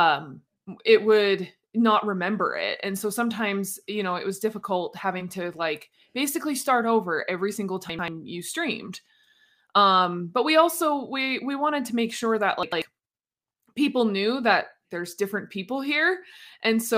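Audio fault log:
7.90–8.08 s and 12.63–12.82 s, chunks out of order: a roughly 93 ms block plays one slot late, causing jumbled sound with three hard joins.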